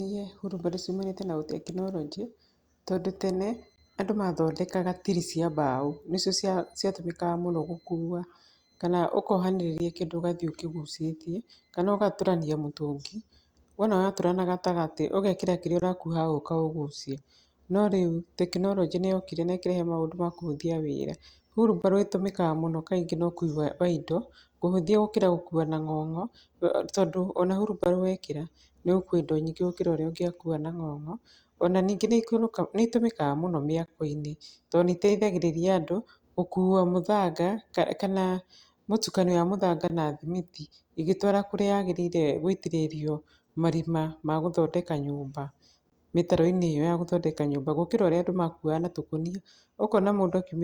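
Gaps between chunks at 3.76–3.78 s (after "tondũ tene"), 9.78–9.80 s (before "kĩndũ ũgathiĩ ũkĩgucĩtie kana"), 15.80–15.82 s (after "na gatagatĩ ũgekĩra kĩrĩa"), 21.82–21.84, 27.84–27.86, 33.86–33.88, 39.88–39.90 and 45.90–45.92 s. Each is a 20 ms hole in the speech. They recur every 6 s because the audio was handled in 6 s chunks with silence inserted at every join.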